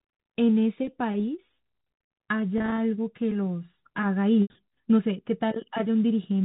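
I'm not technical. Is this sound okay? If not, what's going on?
No. Packet loss with pitch repetition occurs at 2.58–2.78 s and 4.43–4.50 s. Missing bits of speech are patched by repeating sound, causing brief buzzy holds at 2.58 s; the longer gap at 4.43 s fades into silence before the speech returns.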